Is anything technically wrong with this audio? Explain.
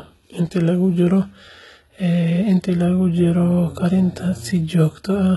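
Yes. Throughout the speech, the likely cause is HE-AAC compression at a very low rate, roughly 16 kbps. Only the lower spectrum is truly coded, and the treble is rebuilt from copied lower bands, so sibilants sound gritty and metallic, with heavy damage and nothing above 11.8 kHz.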